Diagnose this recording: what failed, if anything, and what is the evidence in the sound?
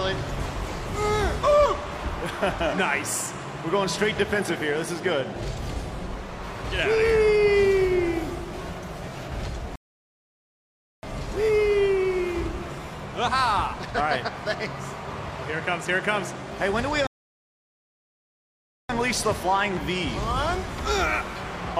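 The failure is at the network and playback stage: a rebuffering stall, twice. At 9.76 s the sound drops to silence until 11.03 s. At 17.07 s it stops again until 18.89 s. Each time, playback picks up exactly where it broke off, with nothing missing. The player drained its downloaded audio and waited for more data to arrive. The gaps add about 1.27 s and 1.83 s to the running time.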